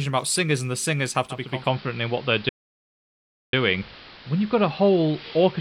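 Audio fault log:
1.25 to 5.60 s, digital radio blending to analogue: just after "singers and the singers" the receiver loses its digital stream and cross-fades over about 467 ms to the AM broadcast of the same station, staying there to the end. A hiss sits roughly 25 dB below the sound, and the level shifts by about 2 dB. A codec dropping to a lower bitrate would narrow the band without adding broadcast hiss or a gradual cross-fade.
2.49 to 3.53 s, playback stall: in the middle of the AM section the output goes completely silent for about 1.04 s before the sound continues. The cause is likely the player running out of data or its thread being blocked, so nothing reaches the output at all. A reception fade would leave the radio's hiss running through the gap. Here the gap is dead silence, with no hiss and no gradual fade at either edge.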